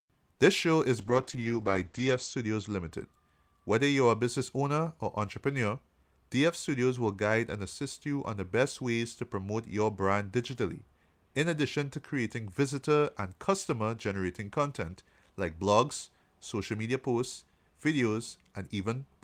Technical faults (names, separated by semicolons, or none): call bitrate drop